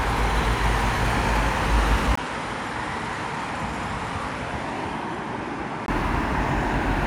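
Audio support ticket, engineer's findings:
Audio turns duller and roughly 10 dB quieter from 2.15 to 5.88 s, with a 20 ms gap at the switch, nothing above 11.4 kHz, and a new noise floor; likely input switched to a poorer device.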